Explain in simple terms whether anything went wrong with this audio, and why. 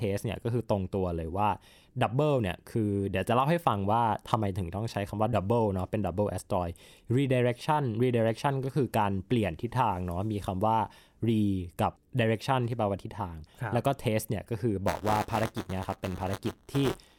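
Buffer tearing starts at 14.87 s and runs to the end: a robotic buzz at 188 Hz, which fits a 256-sample buffer. A small slice of each buffer replays sound about 20 ms old. Unlike dropouts, there's no silence, and the buzz rides only on the speech.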